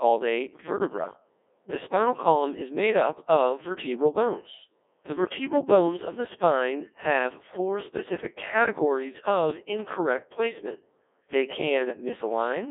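From start to finish, the speech passes through a Codec 2 vocoder. The waveform is not carried. The decoder rebuilds the voice from sine waves, using only pitch, voicing, energy and a rough spectral envelope. The damage is heavy. The voice sounds robotic and buzzy, with a synthetic edge. The band runs from 300 Hz to 3.6 kHz, and nothing is heard above 3.6 kHz. The coarseness fits a rate of around 1.6 kbit/s.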